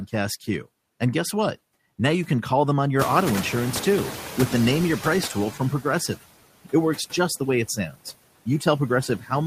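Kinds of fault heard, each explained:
Noise suppressor artifacts: Throughout the clip, the suppressor works frame by frame, pulling down each frequency band it judges to be steady background, here by about 17 dB. The background sinks in the gaps between phrases and swells back underneath the speech, so the residue moves with the talker instead of sitting still.
Noise suppressor catching up: From 2.99 s to 5.57 s, just after "can call them on", the room noise jumps by about 22 dB near the 3 s mark. The suppressor's noise estimate lags behind, so the louder background comes through with only about 9 dB of reduction at first. Over roughly 2.6 s the estimate adapts and the noise sinks down to the deeper, steadier level of cut heard elsewhere.
Speech cut by the noise suppressor: From 7.68 s to 8.06 s, right after "just the way it", the suppressor mistakes part of the speech for noise and turns it down by as much as about 19 dB, so a short stretch of speech sounds swallowed. 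A milder instance follows from 9.08 s to 9.31 s, dipping about 9 dB. In both, only around a sixth of a second of speech is actually pulled down, leaving those moments faint.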